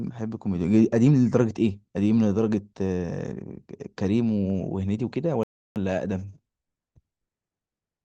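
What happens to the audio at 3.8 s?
Nothing goes wrong at 3.8 s; the speech carries straight through that moment with no dropout, click, distortion or other audible fault.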